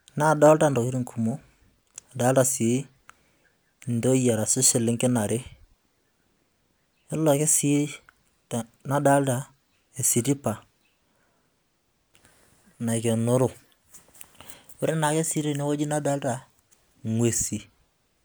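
Listening to the speech recording, nothing stood out as a technical problem at any point.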